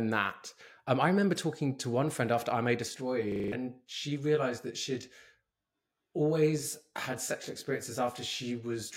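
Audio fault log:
2.88–8.97 s channel delay (comb filtering): From 2.88 s one channel trails the other by around 20 ms. Summed to mono, their shared content cancels at evenly spaced frequencies starting near 30 Hz, leaving a rough, slightly doubled sound. A spectrogram shows fixed, regularly spaced horizontal notch stripes.
3.32–3.52 s system hang loop: A 40 ms slice of sound repeats exactly five times, a 25 Hz machine-gun stutter from playback cycling one buffer while the system froze. Around 200 ms of audio is lost. The waveform shows identical repeated blocks, and the spectrogram shows vertical striping every 40 ms.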